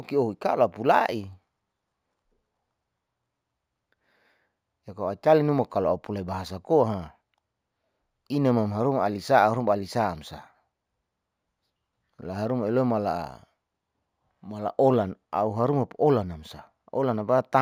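Throughout the speech, there is imaging from linear upsampling. The rate was raised by joining samples with straight lines. That acts as a poor filter. It points to a step from 16 kHz to 48 kHz. The top of the original band sounds dulled. A mirrored copy of the spectrum sits between 8 and 16 kHz. It lies roughly 40 dB below the speech. It adds a faint metallic shimmer to sibilants.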